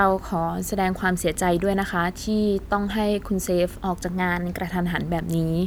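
A drift correction step runs from 4.13 to 4.65 s: for about half a second the speech plays roughly 5.8 percent fast, pitch rising about 98 cents, close to a semitone, before snapping back to normal rate. Speed and pitch move together, so the voice sounds briefly hurried and sharpened. The likely cause is clock-matching software jumping the playback rate in one step to drain or refill its buffer, then releasing it.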